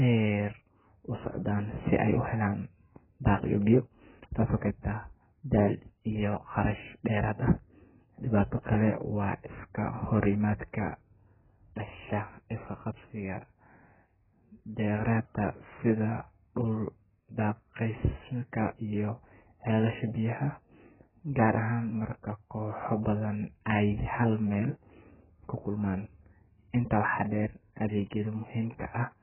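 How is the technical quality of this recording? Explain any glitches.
The speech is dull and muffled from start to finish, with nothing above about 3.1 kHz, and sibilants and held vowels carry a smeared, warbling, fizzy texture. This is heavy AAC compression, likely AAC-LC at a very low bitrate near 8 kbps, which cuts the top band away and quantises what remains so coarsely that the spectrum is left patchy.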